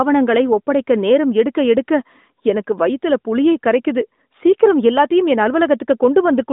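Nothing stood out as a fault on listening to this speech.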